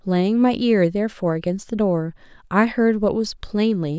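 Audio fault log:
No technical fault can be heard in the speech signal, which stays intact and continuous throughout.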